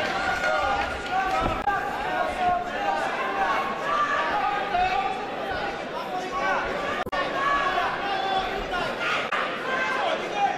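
Damaged data in a compressed stream causes brief glitches at 1.61–1.68 s, 7.02–7.13 s and 9.26–9.33 s, where the decoder loses frame sync.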